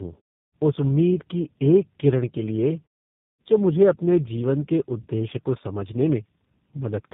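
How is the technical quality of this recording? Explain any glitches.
The recording has one fault that runs through the whole clip: the speech passed through two low-rate speech codecs in series.

Tandem speech coding affects all of the speech. The sound fits a GSM full-rate leg feeding a G.729A 8 kbit/s leg, with a G.711 hop between them. The second coder re-encodes the first one's already degraded output, so the errors compound. The result is rough, muffled, warbly speech with nothing above 3.8 kHz. The pauses fall to silence, as expected from pause muting.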